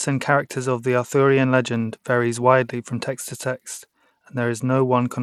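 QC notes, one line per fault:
Throughout: Bluetooth SBC compression, likely from a starved bit pool consistent with about 96 kbps. The upper sub-bands get too few bits, so the speech's treble drops out and flickers, and coarse quantisation leaves plainly audible gritty noise and aliasing riding on it.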